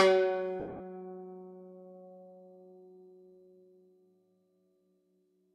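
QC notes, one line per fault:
0.60–0.80 s, lost LE Audio frames: about 160 ms of the music drops out in bursts over 200 ms, the longest run around 70 ms. The LC3 decoder refills each gap with the last spectrum under random signs, so tones smear into noise, fading after the first few frames.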